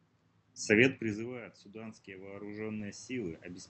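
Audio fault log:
1.16–3.69 s, automatic gain rising: after the talker moves back from the microphone at around 1 s, the level at the input falls by about 23 dB. The gain control treats this as too-quiet input and raises its gain slowly through to the end, so the voice and the room noise swell together. On the waveform, the envelope and the noise floor climb as a steady ramp. On the spectrogram, all bands below the 8 kHz cut-off brighten gradually.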